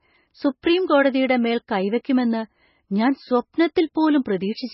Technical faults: MP3 compression

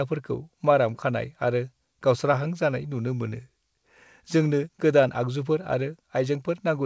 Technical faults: none

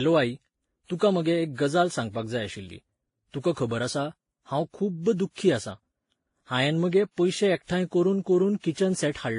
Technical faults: transcoding between lossy codecs

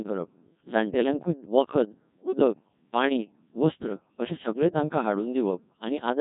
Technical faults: Codec 2 vocoder; bit errors on digital voice radio

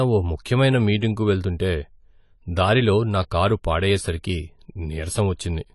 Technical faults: AAC compression

